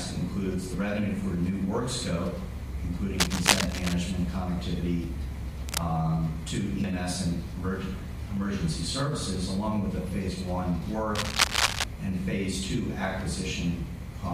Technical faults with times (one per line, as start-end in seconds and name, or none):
3.19-3.94 cable scratch noise
5.04 dropped buffer (overrun)
5.69-5.86 cable scratch noise
6.84 dropped buffer (overrun)
11.15-11.84 cable scratch noise